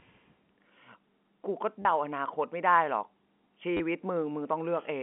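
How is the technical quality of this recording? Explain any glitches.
Two brief dropouts mark this telephone-band speech. Its G.711 coding confines the sound to roughly 200 Hz to 3.4 kHz. At 1.82 to 1.85 s and again at 3.77 to 3.80 s, packet loss with last packet repeated fills each 30 ms gap by replaying the previous chunk, which fits 10 ms packets. The copies don't align with the pitch cycle, so the run buzzes near 100 Hz as a short robotic stutter. A waveform shows identical repeated blocks with small jumps at their joins, and a spectrogram shows a thin vertical streak at each join plus flat, copied harmonics across the gap.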